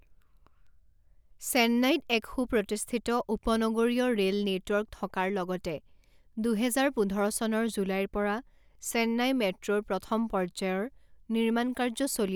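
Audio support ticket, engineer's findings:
Word clock ticks, 0.67 s to 11.5 s: steady train of short ticks, roughly one per second, about fifteen total. Receiver on the digital link is free-running, not locked to the sender's clock. A mismatch of roughly 30 ppm drops or repeats one sample per tick.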